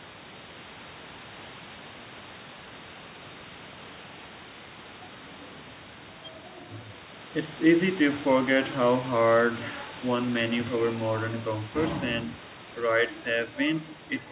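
There are no technical faults to describe, so there is nothing to place in time order.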